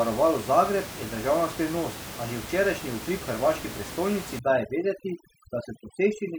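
A speech recording with room noise sitting about 12 dB below the voice, until overdone noise removal takes hold from 4.39 s to the end at 6.38 s. The suppressor, pushed too hard, shuts down frequency bands it mistakes for noise, leaving near-silent gaps with twinkling specks.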